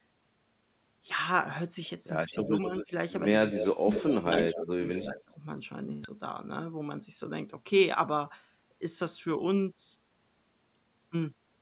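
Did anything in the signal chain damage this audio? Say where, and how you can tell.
Yes, echo leak at the call-processing stage: a faint copy about 0.26 s late at 2.31 and 2.79 s, swelling to about 5 dB under the talker from 3.52 to 5.02 s, likely an echo canceller underperforming.

Speech suppressed in double talk, also call processing: the talker dips from 2.43 to 2.92 s and drops around 25 dB from 3.53 to 5.39 s, likely the canceller ducking both sides.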